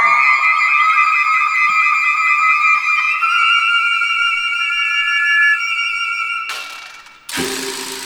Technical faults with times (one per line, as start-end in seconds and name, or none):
4.59-5.61 loudspeaker feedback squeal